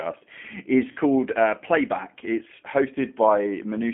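Speech here, squeezed through what sounds like the G.729 codec at around 8 kbit/s. The line band is 200 Hz to 3.4 kHz, so nothing up top, and the coarse pulse-based rebuild of each frame gives the voice a plainly rough, slightly synthetic edge throughout. Around 0.92 to 0.98 s there's VoIP packet loss concealed by the speech codec. Roughly 40 ms went missing, which fits two lost packets, and the decoder stretched its last pitch and filter into a fading tone or coloured noise, and the voice stays weak or distorted for tens of milliseconds or more as normal packets resume.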